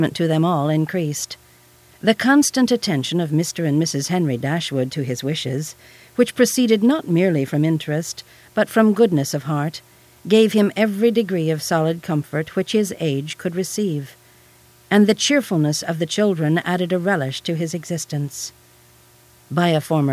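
No technical faults can be heard anywhere in the recording, and the signal keeps an unbroken flow throughout.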